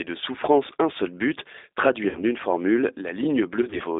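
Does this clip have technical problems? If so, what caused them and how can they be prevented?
Yes. The whole clip has been through the G.729 codec, and the band runs only from about 300 Hz to 3.7 kHz, so it sounds thin and boxy with nothing bright on top. The damage is plainly audible: the speech is rebuilt from a vocal tract filter, a pitch predictor and a few pulses per frame, which leaves it slightly rough and synthetic. That roughness and the narrow band fit the 8 kbit/s G.729A variant. To prevent it, negotiate a wideband codec such as Opus or G.722 on the call.

There's also VoIP packet loss concealed by the speech codec, twice. From 2.09 to 2.23 s about 60 ms of audio went missing in one stretch, and the decoder papered over it by repeating its last pitch and filter at falling gain, so you hear a buzzy tone or coloured noise that fades. From 3.62 to 3.83 s another 60 ms was lost in short gaps of up to 20 ms spread over about 180 ms. 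Because each frame builds on the one before, the sound stays weak a little past each gap. To prevent it, fix the network loss with better QoS or a wired link, or add FEC and a jitter buffer.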